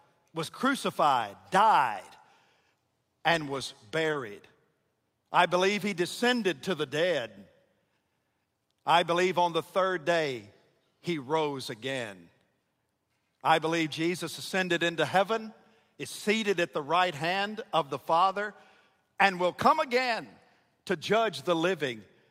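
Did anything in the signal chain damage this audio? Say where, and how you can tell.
Yes, the network stage of this speech call lost packets, and the receiver covered two kinds of gap. The first is a short concealed packet loss from 4.11 to 4.15 s. About 20 ms never arrived, so the decoder extended the preceding sound and blended back in, leaving a brief smear.

The second is a lost packet rebuilt from error correction, at 4.13 to 4.15 s after "and was", and at 16.19 to 16.21 s between "ascended into heaven is" and "at the right hand". The longest is 18.21 to 18.35 s after "right hand of the", about 80 ms, which fits four 20 ms packets. The following packets carried low-bitrate copies, so there's no gap, only rougher, noisier patches. A spectrogram shows blurred harmonics with hazier noise between them, and the waveform looks grainier there.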